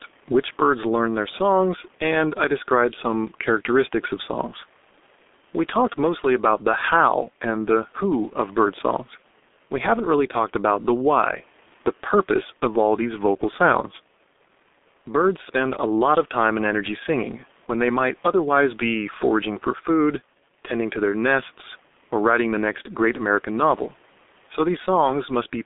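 From start to end, the speech carries heavy G.723.1 codec damage. Only 200 Hz to 3.7 kHz gets through. Speech sounds muffled and hoarse, with blurred consonants, which fits a 6.3 kbit/s rate. Room noise sits about 34 dB below the speech.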